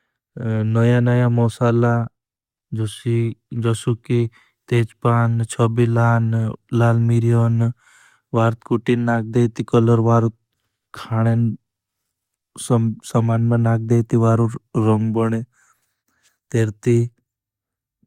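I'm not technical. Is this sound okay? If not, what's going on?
Yes, nothing stood out as a problem when listening to this recording.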